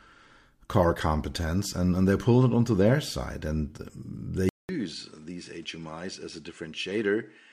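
At 4.49 s the speech drops out for about 0.2 s, then returns with a changed character that persists to the end. This is most likely the input switched to a poorer device. After the gap, nothing reaches above 10.5 kHz, so the top end is gone and the sound turns duller. The level falls by roughly 10 dB, and a new background noise floor appears, sitting around 35 dB under the speech.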